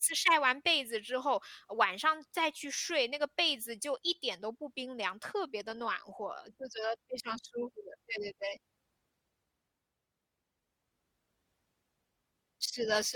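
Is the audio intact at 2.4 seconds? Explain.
Yes, at 2.4 seconds the speech plays through intact, with no audible technical fault at that moment.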